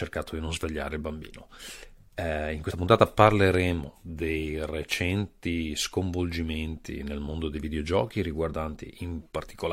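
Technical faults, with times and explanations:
2.70 to 2.72 s and 3.88 s, compressed frames skipped: the speech jumps forward, losing about two frames (around 50 ms) at the first point and about three frames (around 70 ms) just before "dei recenti sconvolgimenti nel", each a multiple of the 23.2 ms frame. Unlike a dropout there is no silent gap.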